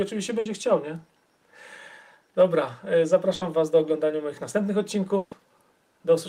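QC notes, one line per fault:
0.39–0.47 s, 3.35–3.43 s, 5.17–5.33 s, burst of packet loss: lost or late packets left 60, 60 and 140 ms gaps, bridged by fading repeats of the last sound; equal lengths of audio are skipped.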